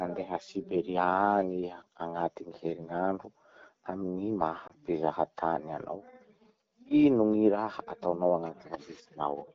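At 4.67 to 4.71 s the speech briefly dips and warbles. This is a lost AMR speech frame: a single 20 ms frame failed its checksum, and the decoder filled the gap by repeating the previous pitch and vocal tract settings at reduced gain. Unlike a network dropout, there is no hard cut to silence, only a smoothed, slightly smeared moment, and a lone frame is too short to fade out. Around it, the wideband codec sounds clean.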